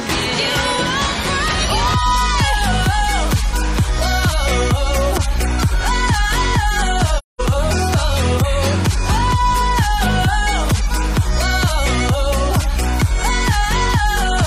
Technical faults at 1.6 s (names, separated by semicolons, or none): none